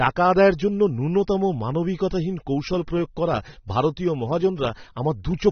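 From start to finish, the speech has nothing above 6.3 kHz. It sounds dull, with plainly audible smearing and a warbling, fizzy edge on sibilants. The likely cause is AAC compression, with a bitrate so low the encoder dropped the top band and coarsely quantised the rest.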